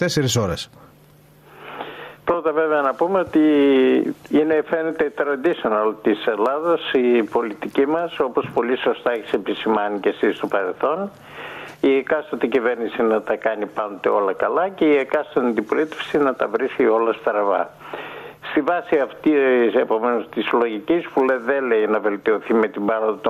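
Gain pumping runs through the whole clip, with the gain swinging by about 10 dB. The likely cause is input gain set far too high, with a fast limiter or compressor clamping down on every peak and flattening the dynamics.

Clock slip clicks run from 0.13 s to 23.27 s as a soft, fast rattle of ticks roughly every 40 ms, clearest on loud sustained sound. They likely come from two unsynchronised clocks, one sample slipping each time the drift totals a sample, which fits an error of around 500 ppm.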